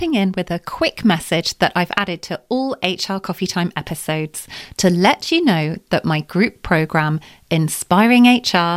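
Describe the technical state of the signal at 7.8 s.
At 7.8 s the speech signal is intact, with no dropout, clipping, glitch or other fault audible at that point.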